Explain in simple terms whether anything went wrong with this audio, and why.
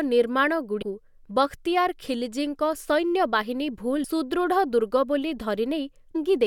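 Damaged data in a compressed stream: parts of the stored file were corrupted, so the decoder briefly misread them and had to resync. That causes short chirps or blips in the speech, at 0.81 to 0.83 s, 4.03 s and 6.14 s.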